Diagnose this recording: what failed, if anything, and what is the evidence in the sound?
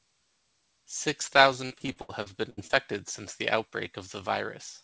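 Repeated packet loss (robotic sound) at the network stage, 1.66 to 2.71 s: eight gaps, the longest 75 ms, each patched by extending the preceding sound, so 30% of that span is concealment. Unlike steady codec roughness under the call path's 8 kHz band limit, it arrives as choppy bursts.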